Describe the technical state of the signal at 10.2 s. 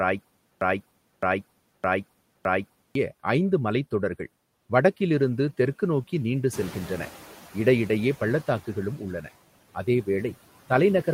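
At 10.2 s, noise suppressor artifacts are present, as throughout the clip. The suppressor cuts steady noise by about 17 dB in pauses and releases it under speech, so it pumps. The room noise, louder since around six and a half seconds, makes this more audible.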